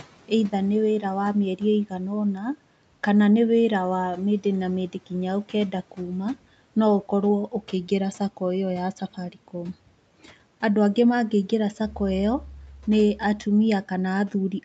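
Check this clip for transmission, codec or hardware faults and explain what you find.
One fault appears twice: speech cut by the noise suppressor. At 2.35–2.45 s, just before "kana nĩ wĩra", and again at 9.0–9.54 s, the suppressor mistook quiet parts of the speech for background noise and turned them down by about 7 dB and about 10 dB. Those sounds come out faint and swallowed. A packet-loss dropout breaks off abruptly, but here the level dips smoothly together with the background.

The Opus call path at 40 kbps limits the audio to 8 kHz, and the room noise sits about 24 dB below the speech.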